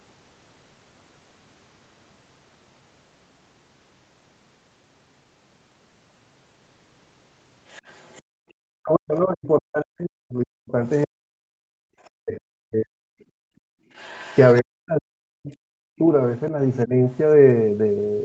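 From 7.68 to 8.22 s a faint second voice sits about 30 dB under the speech, the other side's voice leaking through, likely loudspeaker echo the canceller missed. On a spectrogram it shows as harmonic traces beneath the main voice, all stopping at the 8 kHz ceiling of the call path.

Right after, from 8.22 to 8.41 s, the background is gated by the echo canceller. The room tone drops by about 34 dB for roughly a fifth of a second. In the waveform the noise floor flattens abruptly, and on the spectrogram a near-empty vertical strip appears before the texture returns.

Between 8.69 and 13.24 s the speech is suppressed in double talk, likely because both sides spoke at once and the canceller cut its own talker along with the echo. For about 4 s in total the voice dips by as much as 40 dB, thins or breaks into pieces. The waveform shows chewed, notched envelopes, and the spectrogram shows upper harmonics fading out in patches. 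Within this stretch, short scraps of leaking voice surface at 10.91 to 11.06 s and at 12.04 s, each about 35 dB down.

A second gating dip runs from 13.52 to 13.89 s. The background falls by about 31 dB for roughly 0.4 s, giving the same flattened gap.

From 13.93 to 14.62 s the leak is louder, about 25 dB below the speech, with clearer faint harmonic lines. Double-talk suppression then returns from 14.61 to 16.94 s, gouging the voice by up to about 40 dB over roughly 1.5 s of broken, hollowed segments.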